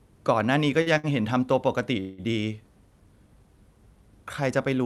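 At 0.40 s and again at 1.43 s a single sharp click cuts through the speech, likely dropped samples, where a fraction of a millisecond goes missing and the waveform jumps abruptly. Between 0.81 and 0.88 s, and again from 0.98 to 1.06 s, a sound is held unnaturally long with a faint buzz or dip. These are short stalls from a late packet: the jitter buffer ran dry, so the receiver stretched the last sound by about 49 ms and then 60 ms before resuming where it left off. From 2.00 to 2.20 s the audio hangs on a fading buzz or hiss for about 178 ms before picking up again without losing anything, likely a call audio freeze caused by delayed packets emptying the buffer. All of this comes through a call codec path whose content stops around 12 kHz, consistent with Opus at a bandwidth of that width.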